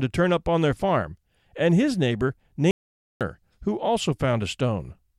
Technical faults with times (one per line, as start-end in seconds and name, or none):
2.71-3.21 audio dropout to silence